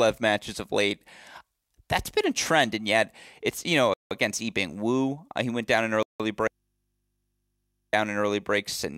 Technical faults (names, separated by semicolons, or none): Bluetooth stall; audio dropout to a faint residue